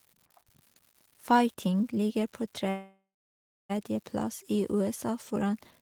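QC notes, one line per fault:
Throughout: unreliable data bit. A steady crackle and fizz sits under the speech and carries on through the pauses. One marginal data line flips its bit in a random share of samples, and each flip makes a spike of the same size.
2.69–3.71 s: call audio freeze, right after "ligger på". The last sound is stretched into a fading buzz, then about 0.66 s of silence. Speech resumes where it stopped, so nothing is lost but everything after runs about 1 s late, likely from held-up packets draining the jitter buffer.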